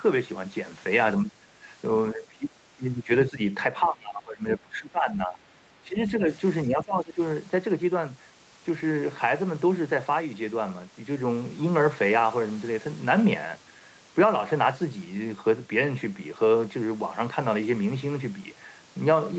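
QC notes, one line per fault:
1.22 to 7.2 s, speech suppressed in double talk: the talker's speech dips at 1.22–1.66, 2.12–2.57, 2.75–3.1, 3.3–3.4, 3.81–5.56, 5.83–6.29 and 6.64–7.2 s. Each of the others is about 10 to 15 dB, and the longest one, from 3.81 to 5.56 s, reaches roughly 20 dB. The speech ducks, thins or breaks into pieces. The likely cause is an echo canceller that treated overlapping far-end talk as echo and turned the near-end talker down along with it.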